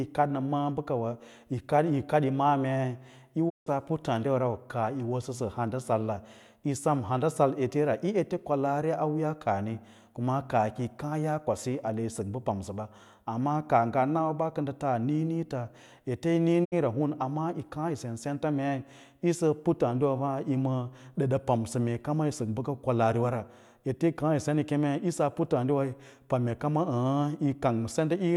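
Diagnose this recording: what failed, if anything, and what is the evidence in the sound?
Digital broadcast dropout, at the reception stage: the speech fades out over about 20 ms and goes silent from 3.48 to 3.68 s, then again from 16.64 to 16.74 s. The receiver lost a few frames, muted until clean ones arrived, and that audio is simply gone.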